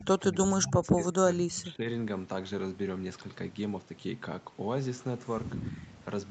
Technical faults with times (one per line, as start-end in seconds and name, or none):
0.00-1.87 speech suppressed in double talk
5.83-5.94 echo leak